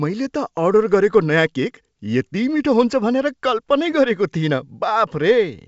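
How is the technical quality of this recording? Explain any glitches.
No glitches can be heard in this speech recording, which carries the band limit of G.722 wideband telephone coding at 64 kbit/s, with content reaching up to 7.7 kHz and nothing above it.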